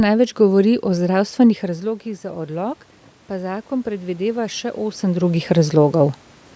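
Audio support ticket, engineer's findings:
AGC gain rising, 1.12–5.80 s after "največ govori o": input fell about 13 dB (talker moved back), gain crept up about 7 dB, swelling speech and room noise together.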